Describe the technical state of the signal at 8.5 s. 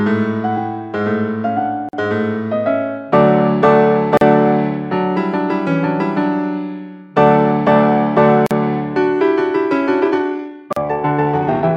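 At 8.46 to 8.51 s there is a gap at a join of encoded pieces: about 44 ms of silence with smeared edges, left by untrimmed encoder delay and padding, before the sound resumes where it stopped.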